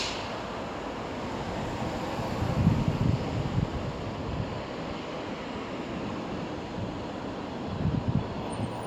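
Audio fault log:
Nothing stood out on listening to these sounds.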